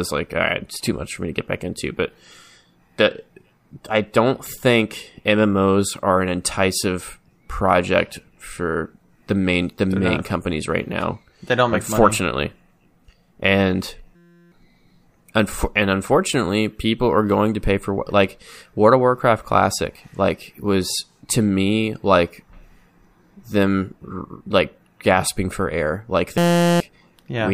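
At 14.16–14.52 s and 26.38–26.80 s, a system hang loop replays one frozen 5.8 ms buffer, giving a steady 172 Hz buzz with even harmonic stripes and an exactly repeating waveform.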